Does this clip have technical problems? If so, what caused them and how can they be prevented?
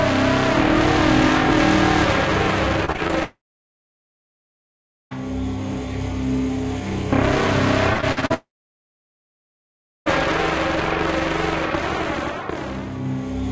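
Yes. There's repeated packet loss (robotic sound) at 2.85–3.11 s and 7.93–8.32 s. Bursts of short gaps, the longest 27 ms and 58 ms, get patched by stretching the previous sound, so it goes choppy. Steadier network conditions or a deeper jitter buffer with forward error correction would help prevent this.

Then there are long network dropouts at 3.23–5.13 s and 8.34–10.08 s. A brief fading buzz or hiss gives way to roughly 1.7 s and 1.6 s of silence, and the audio resumes with that stretch gone. The likely cause is the connection stalling outright. A more reliable link, such as wired instead of congested Wi-Fi, would prevent it.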